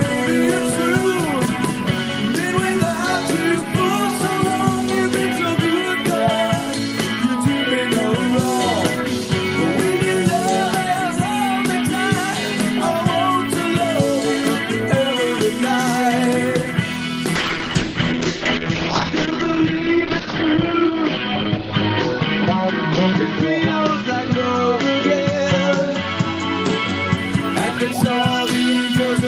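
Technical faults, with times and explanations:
17.37–27.23 s, call bitrate drop: the sound turns coarse and muffled as the audio bandwidth narrows from about 20 kHz to 8 kHz, the top end cut away. The encoder has been told to spend far fewer bits, roughly what you'd expect from a fall from around 48 kbps to near 8 kbps, so detail is quantised roughly and smeared. The worst stretch lasts about 2.65 s before quality climbs back.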